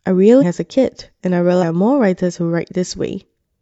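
At 0.38 s the speech breaks into a brief glitch lasting about 0.06 s, the mark of damaged data in a compressed stream. Corrupted bytes there make the decoder misread those frames and lose sync until it finds a clean frame header. A second, similar blip follows at 1.58 s for about 0.05 s. On a spectrogram each shows as a short break in the harmonic bands, and the waveform shows an abrupt discontinuity.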